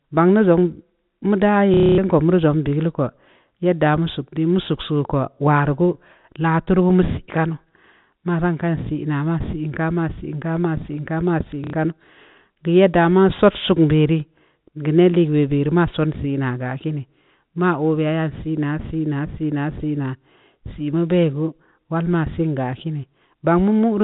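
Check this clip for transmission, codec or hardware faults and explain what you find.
Two dropouts in the speech were covered by repeating the last packet, at 1.74–1.98 s (240 ms) and 11.64–11.73 s (90 ms). Playing one short slice again and again, out of step with the pitch, gives a robotic stutter buzzing near 33 Hz, which fits 30 ms packets. On a waveform the same short shape tiles the gap; a spectrogram shows frozen, vertically striped bands. The G.711 telephone coding cuts everything above 4 kHz.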